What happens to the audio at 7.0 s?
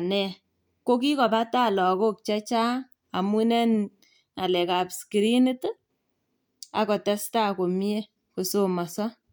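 At 7.0 s the speech carries on intact, with no dropout, click, distortion or other fault at that point.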